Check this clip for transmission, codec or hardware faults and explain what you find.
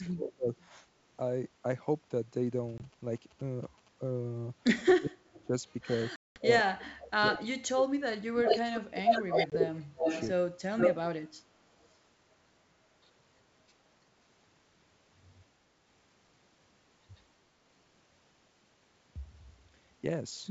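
Three kinds of fault appear in this speech clip: double-talk suppression, echo leak and ADPCM packet loss. The wideband coding sounds consistent with G.722 at 64 kbit/s.

Speech suppressed in double talk, 0.0–0.48 s and 4.87–10.78 s: the speech dips by roughly 30 to 35 dB, for about 3 s in total in the second span. This is likely an echo canceller damping both talkers when they overlap.

Echo leak at 0.58–0.65, 5.27–5.47 and 7.0–7.39 s: a copy of the speech returns 196 ms late, at about −35, −25 and −20 dB. From 8.45 to 11.88 s it returns 336 ms late, about 5 dB louder than the speech. This is likely residual loudspeaker echo that passed the canceller.

Packet loss on an ADPCM call, at 2.78 s, 6.16–6.40 s and 9.50–9.56 s: the first and third are hard 20 ms holes, and the second is a 200 ms hole, which fits ten 20 ms packets. Speech resumes slightly distorted while the decoder's predictor resynchronises.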